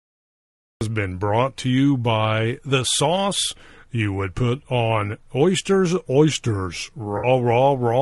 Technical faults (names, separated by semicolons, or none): low-delay AAC compression; cut-off start; AAC frame loss with concealment